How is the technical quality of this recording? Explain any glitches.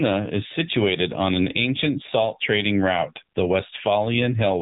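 Technical quality is poor because of plainly audible mobile codec damage across the whole recording. Throughout, there's AMR narrowband mobile codec coding: nothing gets through above about 3.8 kHz, and the speech is rebuilt from a vocal-tract model plus sparse pulses. At a rate that sounds like the 7.4 kbps mode, that makes it plainly buzzy, thin and synthetic.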